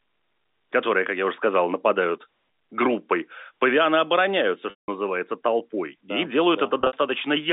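At 4.70 s there's packet loss with pitch repetition: about 180 ms goes missing, so the receiver loops the last pitch period, which buzzes briefly, fades to silence, then cross-fades back in. Around 6.81 to 6.93 s, scattered losses totalling 100 ms (longest run 60 ms) give shorter held, buzzy blips, all over a normal narrowband phone line.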